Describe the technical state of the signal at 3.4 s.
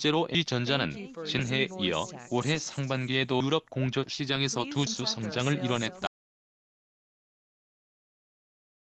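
At 3.40 s, compressed frames are skipped: around seven frames, about 150 ms, are lost, consistent with roughly 26 ms frames. The sound jumps forward with a brief smeared blip, seen as a discontinuity in waveform and spectrogram.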